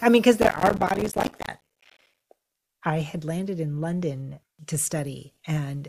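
Processor overload crackle runs from 0.42 to 2.20 s. The processor misses buffer deadlines over and over, and each small gap of silence adds to a gritty, tearing crackle over the speech.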